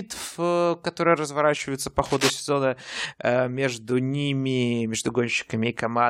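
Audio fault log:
2.05 to 2.30 s, cable scratch noise: a worn cable or connector was likely shifted, so its contact resistance jumped about rapidly and let a dense, irregular spray of noise into the signal path for roughly a quarter of a second. It lands just after "э которые разворачиваются по" and clears before "сезона э между ними", heard as a ragged scratching rustle about as loud as the speech itself, briefly laid right over it.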